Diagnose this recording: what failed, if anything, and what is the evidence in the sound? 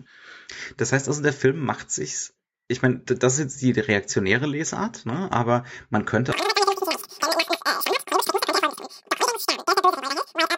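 Wrong sample rate at the playback stage: from 6.32 s, right after "ne aber man", to the end at 10.58 s, the speech runs three times too fast and about 19 semitones high. Pitch and tempo rise together, unlike a pitch shifter. This fits 16 kHz audio played at 48 kHz.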